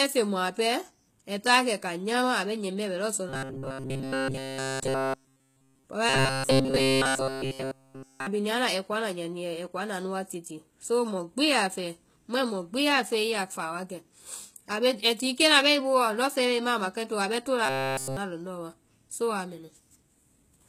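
Speech coded throughout with plainly audible damage from what is likely HE-AAC compression, at a low rate that fits about 20 kbps. The rebuilt treble turns s sounds gritty and metallic. Unlike plain low-pass dulling, the top stays bright but synthetic. From 3.29 to 5.84 s, 6.09 to 8.27 s and 17.66 to 18.17 s, the sound becomes a rigid 133 Hz buzz that still roughly tracks the speech. This is robotic sound from likely repeated short buffers, with essentially all the audio replaced by loops of about 7.5 ms. Unlike dropouts or clicks, nothing goes silent; a fixed-rate buzz is imposed instead.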